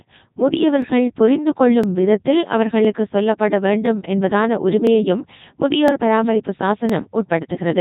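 From the first moment to the last, the speech has the robotic, buzzy character of the Codec 2 vocoder, and the damage is heavy. Rather than keeping the waveform, the decoder rebuilds the voice from sine waves using only pitch, voicing, energy and a spectral envelope, which fits Codec 2's 3.2 kbit/s mode. On a spectrogram, the harmonics look unnaturally regular and nothing appears above 3.8 kHz. The waveform looks smooth and synthetic rather than natural.

Overlapping chunks add a short stutter or click at 0.82, 1.84, 2.85, 3.86, 4.87, 5.88 and 6.90 s. The audio was handled in 1.0 s chunks, and each chunk began before the previous one ended, so 12 ms of sound plays twice at every join. This produces the steady rhythm of ticks about once per second. On a waveform, each join shows a brief repeated cycle pattern with a discontinuity. On a spectrogram, each join appears as a thin vertical stripe.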